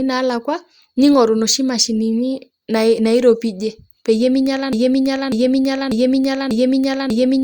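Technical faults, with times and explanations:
4.73 s to the end: broken-record loop. A 0.59 s fragment of the speech repeats exactly, back to back, five times until the clip stops. The phrase stutters mechanically, and the speech that belonged in that stretch is lost. The likely cause is a player or stream that stalled and kept resending its last fragment. A spectrogram shows one 0.59 s block of harmonics tiled identically along the time axis, and the waveform shows the same envelope stamped out at each repeat.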